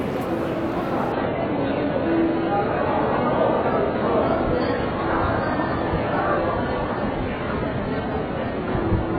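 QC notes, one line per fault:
1.12 to 9.18 s: adaptive stream at a lower bitrate. The sound dulls suddenly, without a gap. Nothing survives above 4.8 kHz, fitting a very low-bitrate stream.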